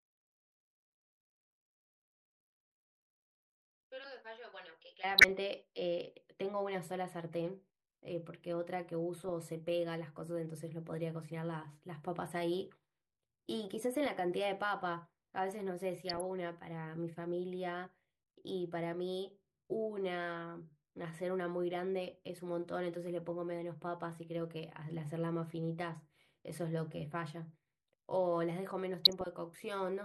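A speech recording broken by five short bursts of DAB burbling, at 5.15–5.31 s, 9.16–9.30 s, 14.06–14.09 s, 16.08–16.21 s and 29.05–29.26 s, each a spatter of short noise blips. Weak reception let a few bit errors in a thousand slip past error correction, corrupting MP2 sub-band samples and scale factors. On a spectrogram this shows as isolated rectangular blocks jumping brightly in single frequency bands, frame by frame.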